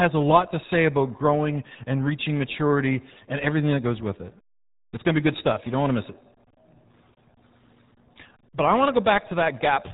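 Speech runs through the RealAudio 14.4 codec from start to finish, with heavy coding damage that fits an 8 kbit/s dial-up stream: nothing above 3.8 kHz survives, leaving the voice muffled and gargly.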